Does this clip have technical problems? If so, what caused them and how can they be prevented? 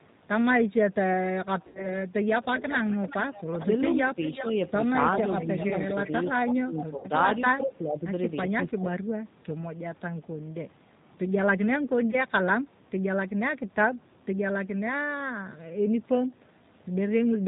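Yes. The whole clip is speech coded with G.729 at 8 kbit/s. The voice sounds rough and synthetic, with nothing above 4 kHz. A wideband codec such as Opus would prevent this.

There is VoIP packet loss concealed by the speech codec at 1.67–1.91 s, 6.98–7.08 s and 12.11–12.24 s. The decoder stretches the last sound into a fading buzz or noise. The gaps fit about 80, 60 and 20 ms of lost audio. A wired connection or a jitter buffer with redundancy would reduce the loss.

There is an echo leak at 2.55–3.66 s and 4.21–4.46 s. A copy of the voice returns 384 ms later, about 10 dB quieter. It likely comes from a far-end loudspeaker that the echo canceller did not fully remove. A headset or better echo cancellation would prevent it.

Speech is suppressed in double talk at 3.59–4.35 s, where it dips about 5 dB. It happens again at 6.29–8.87 s, with dips of up to about 15 dB over roughly a second in total. 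An echo canceller likely ducked the talker while both sides spoke. A headset on the talker's side would let the canceller stop ducking.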